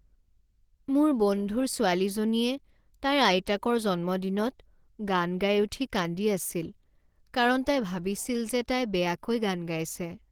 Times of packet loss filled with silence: none

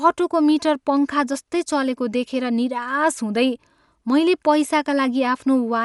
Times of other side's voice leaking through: none

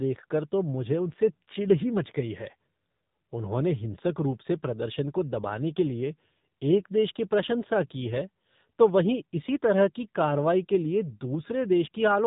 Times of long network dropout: none

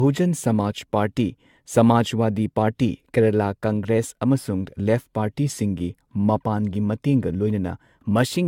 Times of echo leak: none

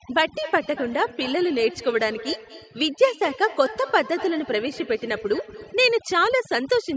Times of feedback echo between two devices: 0.43-5.91

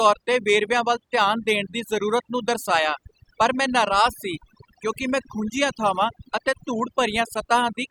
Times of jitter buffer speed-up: none

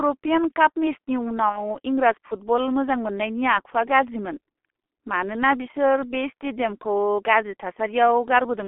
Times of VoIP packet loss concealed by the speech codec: 1.49-1.75

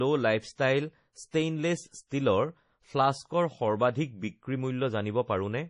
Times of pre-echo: 1.31-1.33, 2.08-2.11

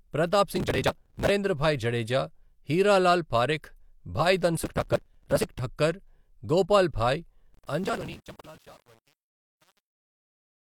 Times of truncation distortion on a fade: 7.53-10.77

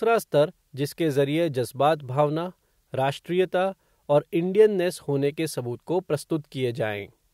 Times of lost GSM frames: none

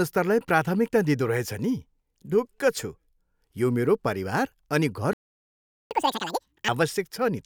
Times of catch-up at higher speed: 5.91-6.68

